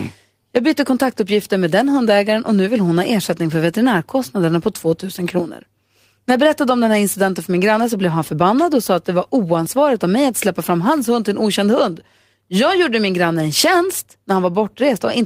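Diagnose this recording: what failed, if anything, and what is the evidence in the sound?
Nothing in the recording chain shows a failure.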